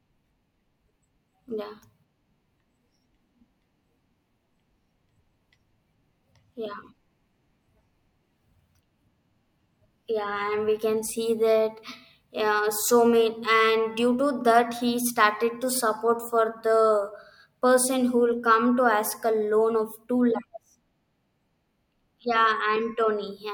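No technical faults can be heard anywhere in this speech recording. There is nothing in the signal that calls for a timestamp or an explanation.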